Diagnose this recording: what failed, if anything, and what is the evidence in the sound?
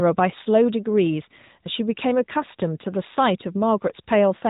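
The failure is at the codec stage: the speech passed through the AMR narrowband mobile codec, and the damage is plainly audible for the whole clip. Nothing above about 3.8 kHz survives, so sibilants and breath lose their edge and the voice sounds boxed-in, as on a phone line. The codec rebuilds each frame from a vocal-tract model excited by a handful of pulses, leaving a buzzy, synthetic texture that fits a mid-range mode of around 10 kbps.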